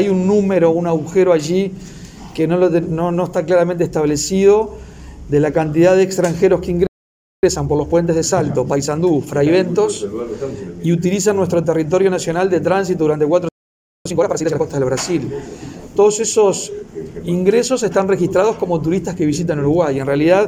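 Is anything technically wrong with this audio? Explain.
Yes, the audio twice drops into silence and then rushes to catch up.

Playback stall: at 6.87 s and again at 13.49 s the sound cuts out mid-flow for about 0.56 s and 0.57 s, then resumes abruptly. This is a playback stall, where the output falls silent because the player, likely starved of buffered data or blocked on its processing thread, has nothing to send until it recovers.

Time-compressed catch-up: right after each gap the audio sounds hurried at unchanged pitch. From 7.43 to 9.67 s it runs at 1.25 times normal speed, and from 14.06 to 14.62 s at a more obvious 2 times. To shed the backlog built up during the stall, the player drops short slices and cross-fades the remaining pieces together, which produces the rush.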